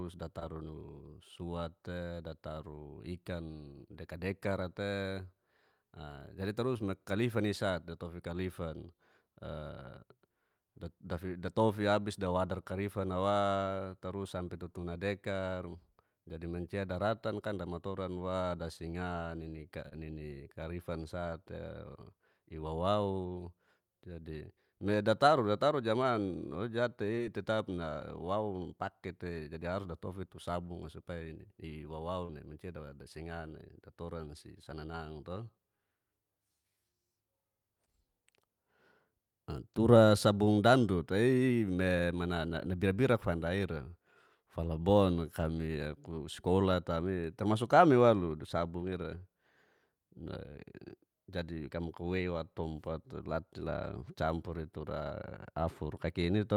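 At 0.39, 19.89, 27.15 and 32.25 s the speech briefly smears or wobbles: short concealed packet loss. Each time, roughly 20 ms of the stream arrived too late (about 40 ms at 32.25 s, which fits two lost packets), and the receiver extended the preceding sound before blending back. Unlike a plain dropout, there is no silence or hard click, just a slurred patch lasting a few hundredths of a second.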